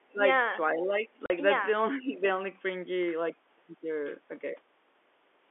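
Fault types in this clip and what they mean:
speech suppressed in double talk: at 0.03–0.22, 0.79–1.1 and 1.98–2.23 s the speech dips by up to about 20 dB, likely an echo canceller turning down overlapping talk.
packet loss filled with silence: at 1.26–1.3 s there is a 40 ms hole with hard edges where missing audio was replaced by silence, which fits two 20 ms packets.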